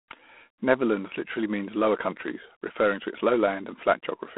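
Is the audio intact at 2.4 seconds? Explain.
No. G.726 ADPCM at 24 kbit/s, present throughout, codes prediction differences too coarsely, so at 2.4 s the speech carries a harsh, level-following hiss, with nothing above 3.9 kHz.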